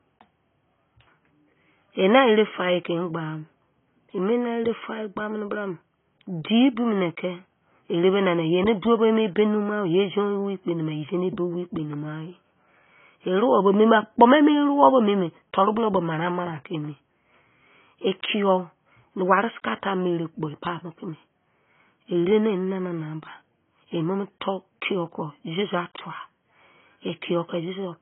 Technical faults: AAC compression

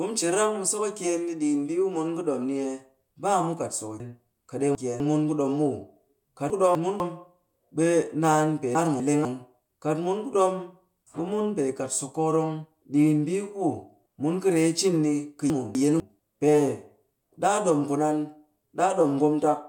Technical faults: chunks out of order

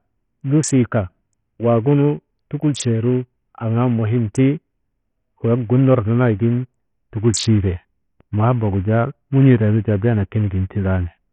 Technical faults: Bluetooth SBC compression

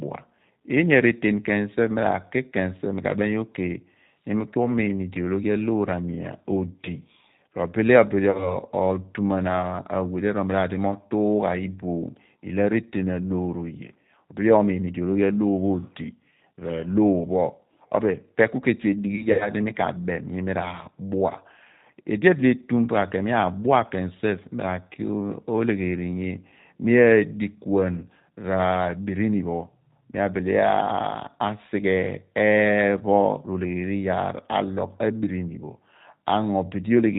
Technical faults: G.729 codec; VoIP packet loss concealed by the speech codec

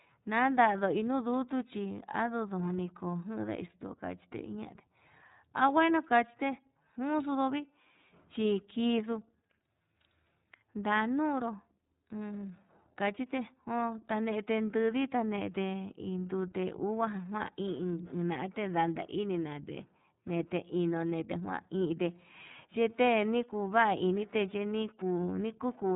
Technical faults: iLBC codec

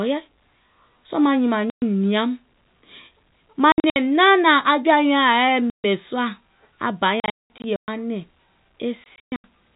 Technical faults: packet loss filled with silence

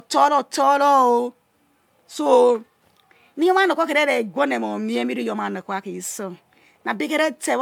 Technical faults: generation loss

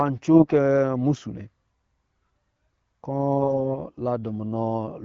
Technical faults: AMR bit errors

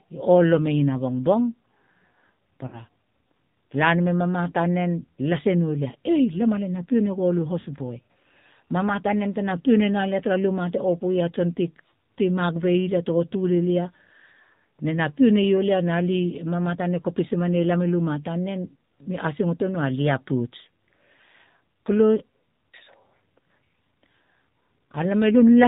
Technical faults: AMR narrowband mobile codec; lost AMR speech frames

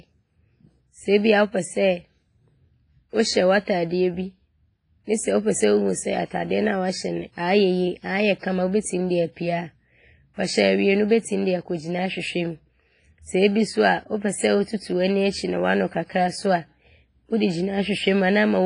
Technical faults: WMA compression

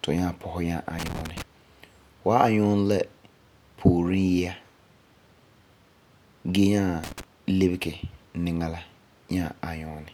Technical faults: loose connector crackle

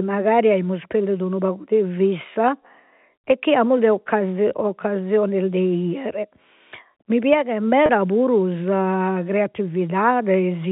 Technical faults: packet loss with pitch repetition

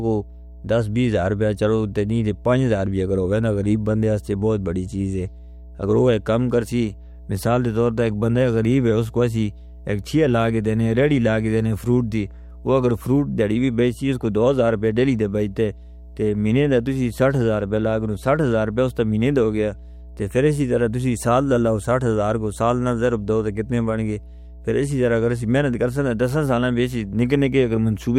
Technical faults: mains hum

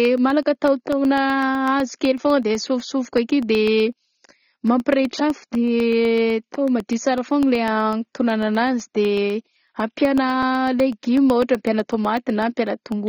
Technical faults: AAC compression; periodic USB or driver dropouts

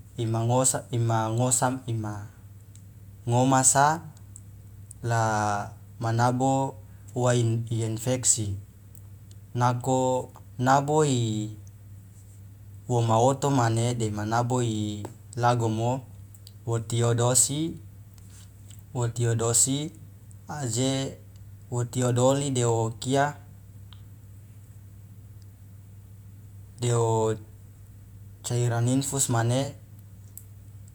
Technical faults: none

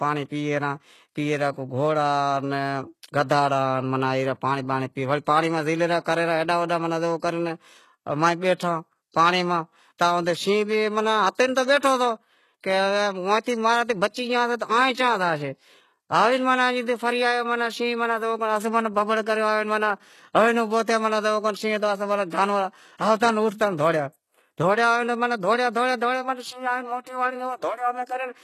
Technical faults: HE-AAC compression; pre-echo

